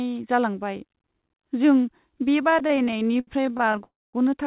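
From 2.5 to 3.81 s the audio shows repeated stalls (stutter): dozens of brief gaps, none longer than 69 ms, filled by repeating the last sound, so it drags without losing anything. At 3.83 to 4.15 s comes a call audio freeze, a single 300 ms hold that fades into about 230 ms of silence before resuming. Unlike the stutter's many short stalls, this is one long stop, likely from a sudden 300 ms network delay jump emptying the jitter buffer. Throughout, the sound is band-limited at 4 kHz, which fits a narrowband call codec.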